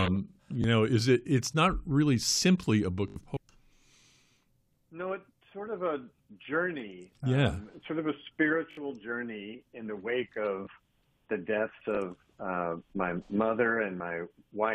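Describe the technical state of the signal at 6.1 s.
At 6.1 s the signal is intact, with no technical fault audible at that moment.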